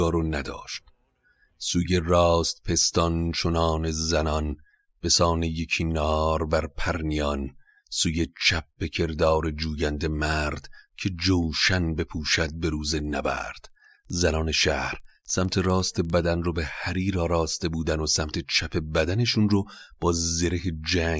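From 12.95 to 16.25 s, the resampler restarted on every block: each 50 ms block converted from 48 kHz to 16 kHz in isolation, leaving edge errors heard as a 20 Hz ticking.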